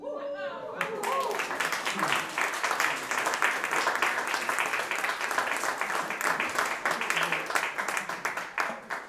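No technical faults are audible anywhere in the recording.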